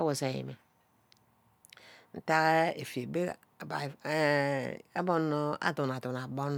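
No technical faults can be heard anywhere in the recording.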